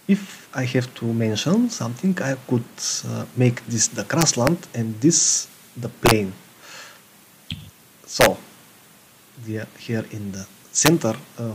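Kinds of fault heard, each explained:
Integer overflow: loud peaks exceeded the largest integer value and wrapped to the opposite sign instead of being limited, producing sharp full-range cracks at 4.21–4.47, 6.06–6.11, 8.21–8.26 and 10.86–10.88 s, where the signal ran about 1 to 4 dB over the limit.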